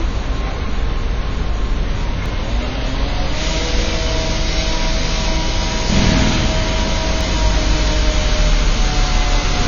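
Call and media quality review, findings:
AAC compression, throughout: nothing above 6.9 kHz, dull and smeared top end, audible codec damage with fizzy, warbling texture on sustained sound. Likely an AAC-LC encoder starved for bits, consistent with about 24 kbps, lowering cut-off and thinning spectrum.

Audio missing between chunks, at 2.26, 4.73 and 7.21 s: short skips, each a few tens of milliseconds lost, spliced without silence. Regular spacing of about 2.5 s points to the chunked recording or processing stage, likely dropping audio at each chunk handover.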